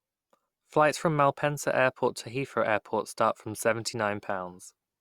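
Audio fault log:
Nothing stood out on listening to this speech recording.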